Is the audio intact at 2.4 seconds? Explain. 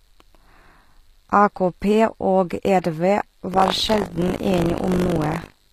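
No, at 2.4 s, as through the whole clip, the treble has that gritty, metallic edge and nothing sits above 14.9 kHz. That's likely HE-AAC compression, rebuilding the top end by copying lower bands upward, which fits a low bitrate around 24 kbps.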